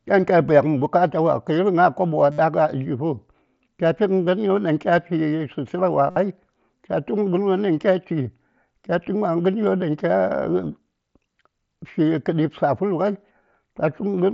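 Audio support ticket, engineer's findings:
Concealed Bluetooth headset packet loss, 2.31–2.39 s: a 70 ms run of buzzy, held tone at steady level, slight warble on recovery. The length points to about nine lost headset frames, patched by repeating the best-matching recent stretch of waveform. Same fault at 6.10–6.16 s: 60 ms, about eight frames. Component is the headset-to-phone radio link, which carries a light-grain mSBC wideband signal capped near 8 kHz.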